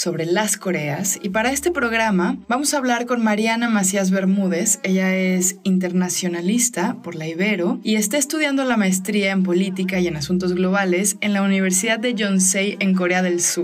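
Two sharp, isolated clicks at 5.47 s and 7.33 s in the audio, likely dropped samples, where a handful of samples vanish and the waveform jumps abruptly.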